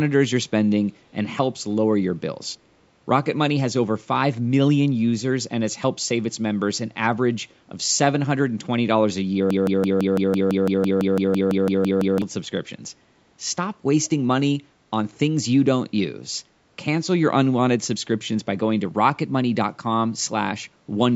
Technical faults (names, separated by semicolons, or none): broken-record loop